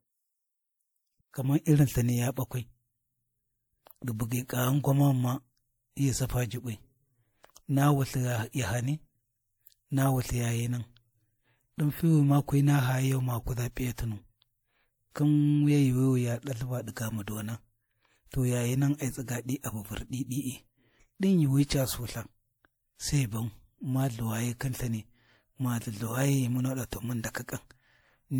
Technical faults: transcoding between lossy codecs

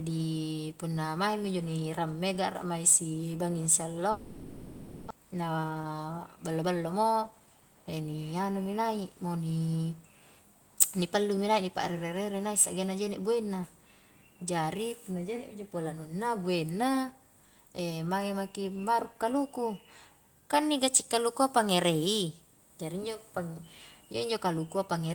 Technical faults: long network dropout; jitter buffer speed-up

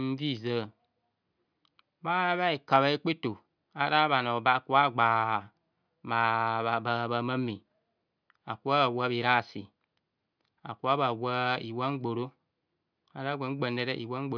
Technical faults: none

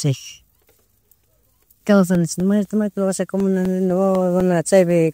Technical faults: periodic USB or driver dropouts

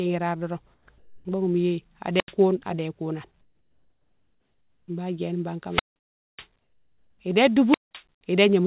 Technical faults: comfort noise in place of the background; wireless microphone squelch dropout; onset clipped by the voice detector

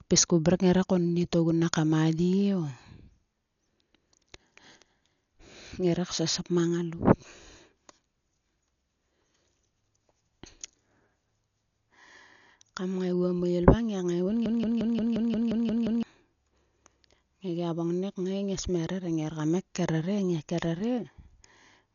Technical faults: Dolby Digital compression; broken-record loop

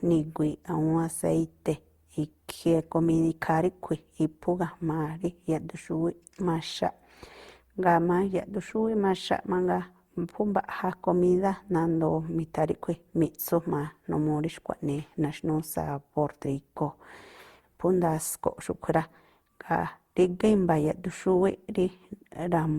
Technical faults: generation loss

